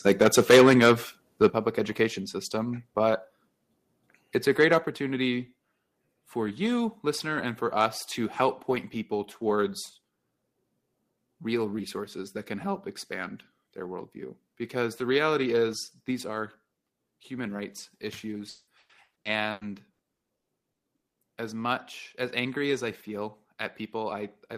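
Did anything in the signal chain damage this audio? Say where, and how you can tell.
Yes. The first stage affected is the converter, which shows microphone overload. From 0.06 to 0.93 s the loudest peaks are flattened, driven about 14 dB past full scale, with a few percent of samples clipped, giving a harsh crackle on every peak. Shorter bursts follow at 1.42–1.47 s (about 2 dB over) and 4.6–4.77 s (about 3 dB over). The sharp edges point to an input gain set too high for the signal, squaring off the waveform tops.

Call processing adds a microphone volume stepped down fault. The overall level, background included, drops suddenly at 0.51 s by about 2 dB, at 1.5 s by about 6 dB, and at 4.86 s by about 4 dB. Each step lands during or just after a clipped passage, so the likely cause is automatic gain control on the call reacting to the overload by lowering the device input volume in one jump, rather than fading it smoothly.

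The network stage shows repeated packet loss, heard as robotic sound, from 18.49 to 21.17 s. Around a dozen holes come in quick succession, the longest about 180 ms, and nearly half of that span is concealed audio. The choppy texture comes from the decoder stretching the last received sound across each missing stretch, with the next loss arriving before the stream settles.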